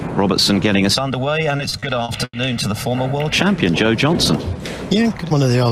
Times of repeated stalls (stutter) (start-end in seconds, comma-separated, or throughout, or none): 1.57-2.35